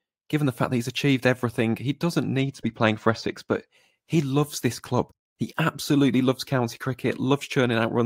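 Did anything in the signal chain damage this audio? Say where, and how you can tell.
Yes. Between "achieved everything he doesn't" and "he loves this club", from 2.38 to 3.75 s, channel delay (comb filtering) at the mono fold-down dulls the top. One channel lags roughly two samples, cancelling around 10 kHz, a dark horizontal notch on the spectrogram.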